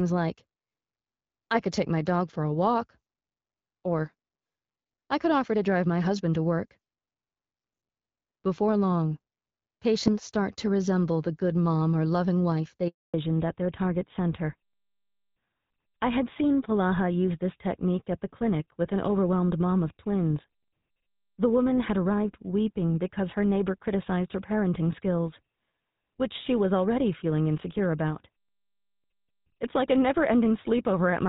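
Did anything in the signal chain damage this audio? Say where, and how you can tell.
Yes. At the network stage, there's a handover gap at 12.88 s. The speech dies away and stays silent for 260 ms, until 13.14 s, while the call switched networks and no frames arrived.

At the codec stage, there's a fallback to narrowband from 13.14 s to the end. Everything above 4 kHz disappears, so the speech sounds duller and rougher than the clearer HD Voice before the gap. That fits AMR-WB around 12.65 kbit/s dropping to a GSM full-rate codec.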